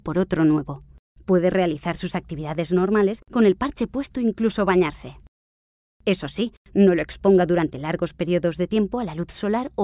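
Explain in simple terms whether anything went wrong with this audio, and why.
Nothing went wrong that could be heard: listening closely from beginning to end, no part of this audio stood out as a problem.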